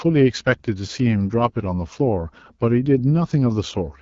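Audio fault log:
Throughout: AMR wideband (HD Voice) codec. The speech comes across rough and raspy, with plainly audible coding damage from the pulse-driven vocal tract model, which fits its low 8.85 kbit/s mode. Above 6.4 kHz there's only shaped noise, and nothing at all past 7.5 kHz.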